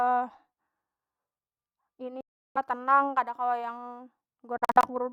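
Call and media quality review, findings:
Likely Bluetooth dropout, packets to headphones arriving late and discarded. Speech cuts to silence 2.21–2.58 s, abrupt or briefly faded edges, then resumes mid-flow as if it had played on. Second burst 4.58–4.85 s: short scattered gaps, longest about 46 ms, roughly 160 ms lost.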